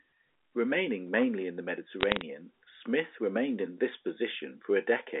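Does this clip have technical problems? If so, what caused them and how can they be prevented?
Yes. From 2.00 to 2.21 s, bit errors on a digital phone line flip individual samples, at a couple per thousand bits, producing sharp ticks. They show as lone spikes on the waveform and thin vertical streaks across the telephone band on a spectrogram. Error detection and correction on the digital link, or a cleaner transmission path, would prevent them.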